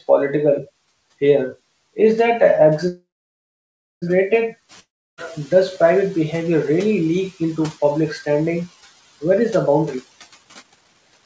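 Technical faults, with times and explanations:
2.88 to 4.04 s, call audio freeze. The sound stops and the last fragment is carried on as a buzzy hiss that fades. It then drops to near silence for about 0.97 s. At 4.04 s the sound resumes from exactly where it broke off. Nothing is lost, but about 1.14 s of gap has been inserted. This is likely packets held up in transit, leaving the jitter buffer empty until they arrived.
4.69 to 6.11 s, noise suppressor catching up. Around 4.5 s the room noise jumps by about 10 dB. It first comes through strongly, then sinks by about 8 dB over roughly 1.4 s. The suppressor was still working from its old, quieter noise estimate. It needed that time to track the new level. Once adapted, the noise sits about 23 dB below the speech.
4.80 to 5.19 s, long network dropout. The sound breaks off mid-flow. A short fading buzz follows, then about 0.32 s of silence. 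When the sound returns at 5.19 s, it picks up further on. Roughly 0.38 s of material is gone for good and was never heard. The likely cause is a stretch of packets that never arrived. The receiver could only fill the hole, not recover it.
9.75 to 9.95 s and 10.43 to 11.23 s, jitter buffer speed-up. The first stretch runs about 1.15 times normal speed, trimming a few tens of milliseconds. The second is much stronger, about 1.68 times, and removes around half a second. Pitch stays the same, but the speech sounds rushed. The buffer had built up excess delay. It shed it by cutting many short pitch-period pieces in quick succession.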